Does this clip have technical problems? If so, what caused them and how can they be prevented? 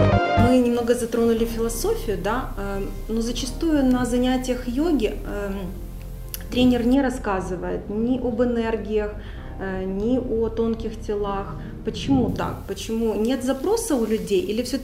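Yes. From 6.95 to 12.28 s the sound turns dull and muffled, the mark of de-emphasis applied wrongly: a treble cut meant to reverse pre-emphasis hit audio that had none, or was applied twice, sloping smoothly to about 13 dB down at 10 kHz. Unlike a low-pass filter, there is no sharp cut-off. Apply de-emphasis only when the source's pre-emphasis flag confirms it is needed.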